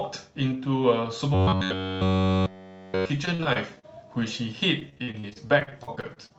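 From 1.34 to 3.10 s, new audio seems to have arrived too seldom, most likely a playback buffer running dry, so the same short stretch was replayed again and again in place of fresh sound. This is robotic sound from repeated short buffers: essentially the whole span carries a rigid, metallic buzz at 94.1 Hz, which fits a repeated slice of roughly 10.6 ms, while the speech's rough outline still comes through.

From 3.25 to 4.23 s comes repeated packet loss (robotic sound). Chunks of the stream went missing in quick succession, and each hole was bridged by stretching out the last sound heard. About 178 ms is patched this way, with 120 ms of real speech lost and the longest hole about 44 ms, so roughly a fifth of the span sounds choppy.

The same packet loss returns, heavier, from 4.79 to 6.32 s. Far more holes pile up, 463 ms is patched over and 440 ms of speech never arrives, with gaps up to 42 ms. 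Close to a third of this span is concealment, and it breaks into a stuttering, choppy texture. Throughout the clip, the call codec's band limit keeps the top end below about 8 kHz.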